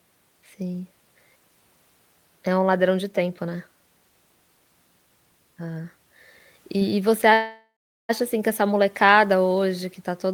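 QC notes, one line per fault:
7.33–8.11 s, call audio freeze: after "e e você" the sound stretches into a fading buzz, then about 0.38 s of silence, resuming intact at "assim que essa molecada"; likely delayed packets draining the jitter buffer.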